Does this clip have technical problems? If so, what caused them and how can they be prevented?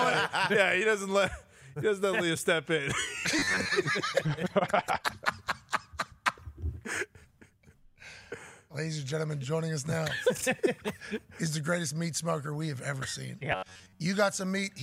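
Yes. Twice, the playback software likely ran short of fresh audio and covered the gaps by looping a short buffer of about 10.7 ms, skipping most of the real signal. This produces robotic sound from repeated short buffers from 3.39 to 3.71 s and again from 13.52 to 14.01 s. The loop imposes a fixed 93.8 Hz buzz, giving the sound a rigid, metallic quality that only loosely tracks the original. A larger jitter buffer and steady, high-priority audio delivery would prevent it.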